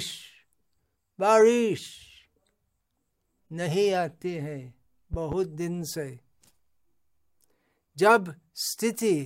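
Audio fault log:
5.14–5.35 s, loud pop: you get a quick double pop here, two sharp thumps in quick succession peaking a few dB above the speech, which keeps going right underneath them. That's the signature of a sudden voltage step or spike getting into the line, most likely from a plug, switch, static discharge or driver glitch, with the downstream circuitry rounding it into a thump.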